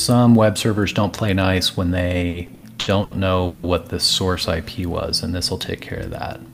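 Between 2.29 and 3.66 s the audio drags and stutters, stalling six times as the last sound is stretched to cover about 440 ms, the longest hold 160 ms. These repeated stalls (stutter) come from packets arriving late, draining the jitter buffer each time.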